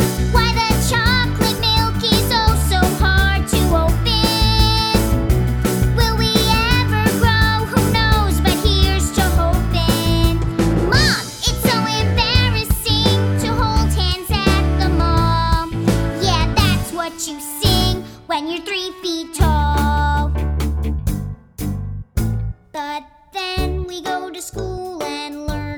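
No technical faults occur at any point in the audio, so there is nothing to describe in time order.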